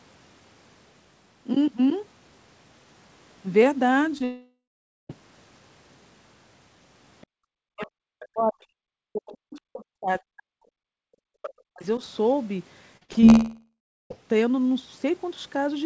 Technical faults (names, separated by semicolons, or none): short concealed packet loss; long network dropout; other side's voice leaking through; speech suppressed in double talk; background gated by the echo canceller; repeated packet loss (robotic sound)